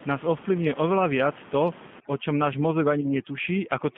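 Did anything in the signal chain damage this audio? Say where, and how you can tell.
Yes. Three separate faults are audible.

At the codec stage, the G.729 codec roughens the whole clip with a slightly synthetic texture. A spectrogram shows nothing below 150 Hz or above 3.5 kHz, and harmonics look smeared. This fits an 8 kbit/s coder, which rebuilds speech from a filter, a pitch predictor and sparse pulses rather than from the waveform.

In call processing, overdone noise removal starts at 2.0 s and runs to the end. The room noise, about 19 dB below the speech, drops and breaks up into isolated twinkling specks. Quieter speech energy vanishes with it. A spectrogram shows patchy blank tiles and scattered isolated dots where bands were switched off.

On the network, VoIP packet loss concealed by the speech codec spans 3.01 to 3.10 s. About 20 ms of audio went missing, which fits two lost 10 ms frames. 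The decoder extended its last pitch and filter into a fading buzzy tone or coloured noise, and the signal stays weak for a while after the packets return. The waveform shows a decaying stretch there.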